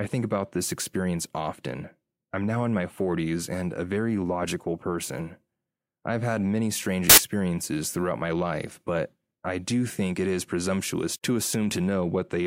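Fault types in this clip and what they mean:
Samples built from the wrong bytes: each sample's bytes are joined in the wrong order or offset, so the rapidly changing low bits dominate, giving a burst of loud, harsh broadband noise from 7.10 to 7.18 s, just after "I've had many strange". Unlike clipping or dropout, the underlying sound vanishes into broadband noise rather than distorting or going silent.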